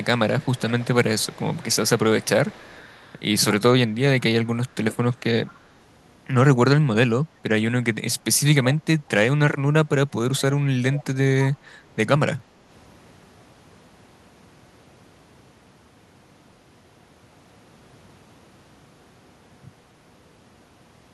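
Echo leak at 0.39–0.87, 1.18–1.99, 2.22–2.29, 2.46–3.16, 5.46–5.59, 8.72–8.76 and 10.96–11.04 s: a faint copy of the speech trails by a steady 189 ms, likely because a far-end echo canceller let loudspeaker pickup through. Room reverb would smear the sound instead of repeating it at a fixed delay.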